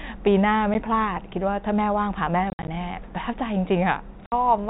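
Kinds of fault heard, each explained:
Packet loss filled with silence: chunks of the stream never arrived and the receiver played silence instead, leaving hard-edged holes in the speech. There's a tiny one at 0.74 s, a patchy stretch from 2.5 to 2.68 s, and 60 ms at 4.26 s, consistent with 10 ms packets.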